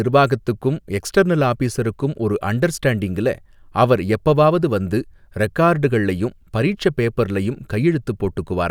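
No technical faults are audible.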